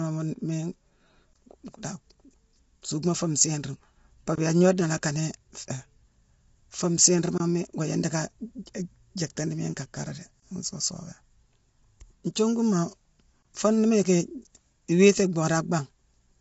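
Throughout, the speech sounds rough and grainy, with noise filling the spaces between harmonics and nothing above 7.7 kHz. This is likely low-delay AAC compression such as AAC-ELD, at a rate that fits about 24 kbps. Its short frames smear pitch detail in a way that plain band-limiting never does.

A gap between chunks appears at 4.36 s, 7.38 s and 10.40 s. Each is a silence of about 23 ms, falling 3.02 s apart. No sound is missing, only delayed across each join, which separates these from packet-loss dropouts that skip audio.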